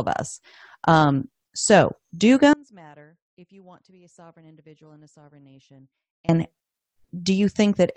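At 2.53 s, right after "us um so do", the speech cuts out abruptly and stays gone until 6.29 s, about 3.75 s in all. The gap isn't silent: a faint leak of the sound remains, roughly 30 dB below its normal level, before full level snaps back. This is an audio dropout to a faint residue, likely from the wanted signal being interrupted while the path after the break stayed live and passed only that trace.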